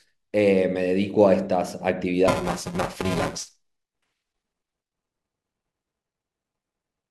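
Buffer tearing from 2.28 s onward: writer and reader cross each period, leaving about a third stale, giving a 375 Hz buzz that fits a 128-sample buffer.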